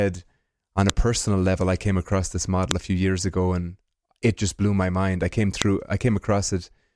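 Three sharp, loud clicks cut through the speech: at 0.90 s, between "on a" and "a personal level I"; at 2.71 s, between "I came across this" and "a few years ago"; and at 5.62 s, right after "my mind I came". Each is a file header played as audio. The recording was joined from separate WAV pieces whose headers were never stripped, so each header's bytes play back as a brief burst of samples.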